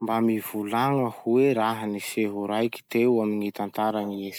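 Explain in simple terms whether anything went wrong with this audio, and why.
Nothing went wrong here: the speech in this recording comes through intact, with no technical faults to be heard anywhere in it.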